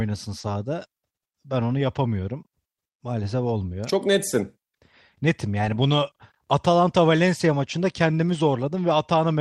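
Right at the start of this speech clip, around 0.39 to 0.45 s, there's a short concealed packet loss. About 40 ms of audio never arrived in time, so the decoder papered over it by carrying the last bit of sound forward and then easing back into the real signal. You hear it as a quick smear or wobble rather than a clean gap.

Overlapping that, from 0.43 to 0.49 s, a lost packet was rebuilt from error correction. The following packets held a low-bitrate backup copy, and the decoder played that instead of leaving a hole. That covers about 40 ms, which fits two 20 ms frames. It comes out rougher and noisier than the audio around it. The same thing happens at 1.71 to 1.73 s, just before "yapamıyorum maalesef olmuyor", where a single 20 ms frame goes grainy. It happens again at 5.61 to 5.71 s, where about 60 ms sounds coarse, consistent with three separate frames patched from their backups.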